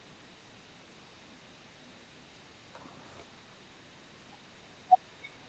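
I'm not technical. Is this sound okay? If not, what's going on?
No. Echo leak runs through the whole clip: a very faint copy of the speech trails about 0.31 s behind it. The likely cause is a loudspeaker on the other end whose echo canceller let some of its own output slip back into the call.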